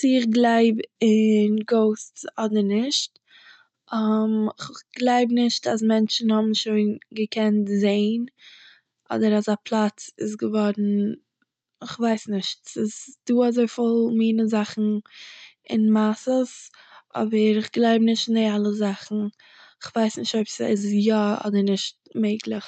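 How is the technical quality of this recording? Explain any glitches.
There are no glitches; the speech comes through intact.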